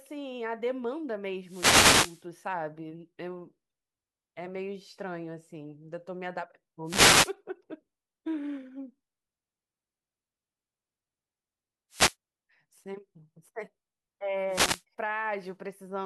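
Four wireless microphone noise hits break into the speech: 1.43 to 2.25 s, 6.85 to 7.34 s, 11.9 to 12.15 s, and 14.48 to 14.83 s. Each is a quick swish of static that washes over the voice for a fraction of a second, the longest about 0.8 s. What's happening is the FM radio link fading as reflected signals cancel at the receiver, so its own noise climbs up through the audio until the signal recovers.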